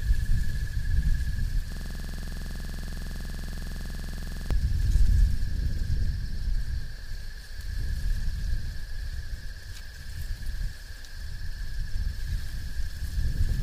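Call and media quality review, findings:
System hang loop, 1.72 to 4.51 s: one 46.44 ms chunk repeats about 60 times, a rapid 21.5 Hz stutter. Driver or system froze; fits a 2048-sample ring buffer.

Block of digital silence, 6.99 s: 1 ms dropout, heard as a tick, not a gap. Output buffer probably not filled in time.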